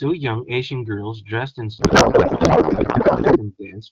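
Right after "girls dressed in", at 1.79 s, the speech collapses into garbled noise and warble that barely tracks it, lasting until 3.38 s. That's a codec payload misread: octet-aligned AMR-WB frames unpacked as bandwidth-efficient, so every field lands in the wrong place. The AMR wideband codec itself sounds clear, which fits 12.65 kbit/s.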